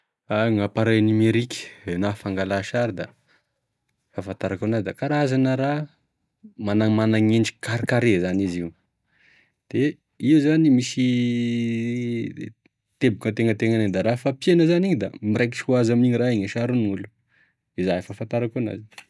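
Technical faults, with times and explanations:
No technical faults can be heard anywhere in this recording.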